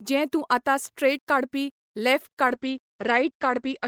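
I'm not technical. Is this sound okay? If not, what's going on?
No. From about 2.49 seconds to the end, the speech turns rough and muffled, losing its crisp upper tones. This is a call bitrate drop: the connection had less room, so the audio was squeezed into far less data and lost detail.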